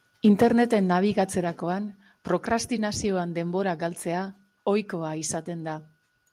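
From 0.25 to 0.63 s the tops of the loudest speech peaks are flattened, adding a harsh, crackling edge. This is microphone overload, likely from input gain driving the signal about 6 dB past the converter's ceiling, with roughly 2 percent of samples clipped. At 0.43 s, inside that distorted stretch, voice and background drop together by about 2 dB, and at 1.44 s they drop again by about 4 dB. These abrupt steps are the microphone volume stepped down, likely by the call software cutting input gain in response to the clipping.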